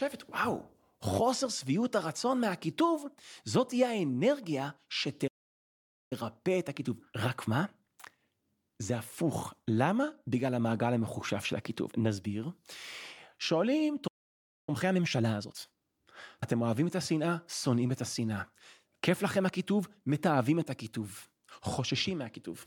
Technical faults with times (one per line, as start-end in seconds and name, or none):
5.27-6.13 playback stall
6.13-9.13 time-compressed catch-up
14.07-14.69 playback stall
14.69-15.89 time-compressed catch-up